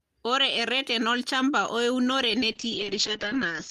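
A short speech recording with two separate faults. Between 1.03 s and 2.08 s, most likely interference from nearby equipment or a faulty connection or power supply injects a train of clicks: about ten similar pulses at an uneven pace, averaging roughly 8.7 per second and peaking at about the same level as the speech. They tick and pop over the audio and into the gaps. From 2.52 s to the end, a call bitrate drop follows a fall in the estimated bandwidth. The encoder is pushed to far fewer bits, which fits a drop from around 32 kbps to about 7 kbps. The audio band narrows from 20 kHz to 8 kHz and stays at its lowest for about 1.1 s, so the speech turns muffled and rough.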